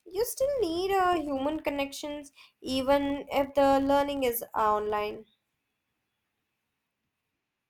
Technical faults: filter restarted on every block

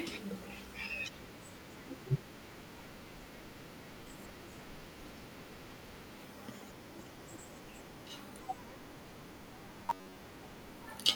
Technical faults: robotic sound from repeated short buffers

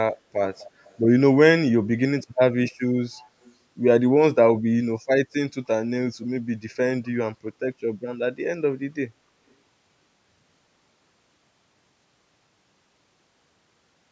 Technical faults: echo leak

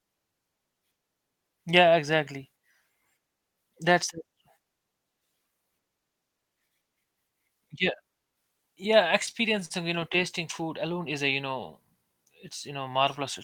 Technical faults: repeated stalls (stutter)

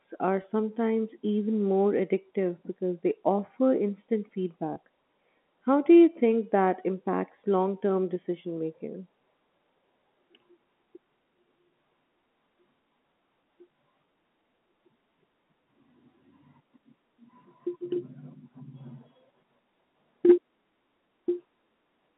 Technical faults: packet loss with pitch repetition

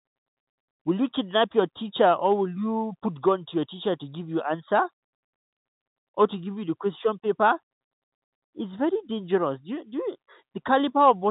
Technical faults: none

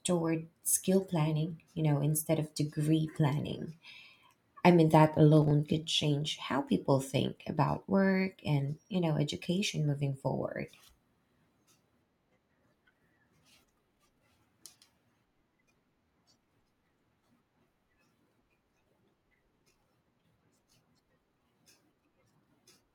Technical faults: processor overload crackle

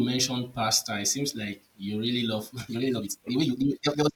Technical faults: time-stretched section

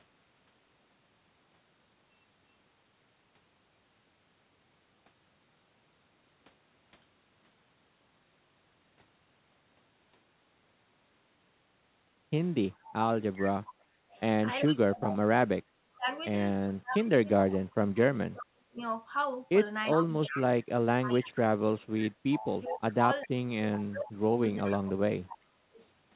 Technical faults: echo leak; speech suppressed in double talk

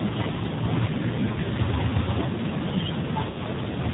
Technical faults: AMR narrowband mobile codec; lost AMR speech frames

